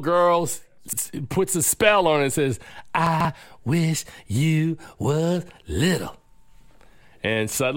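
At 0.88 to 0.98 s, just before "puts a spell on", and again at 3.07 to 3.25 s, between "on it and says" and "wish you was little", there are chunks out of order. Blocks of about 46 ms, which fits a 2048-sample block at 44.1 kHz, play late, by one block and then by three, so the speech briefly jumbles at the hard joins. Unlike a dropout or skip, nothing is missing or silent; the audio is only reordered.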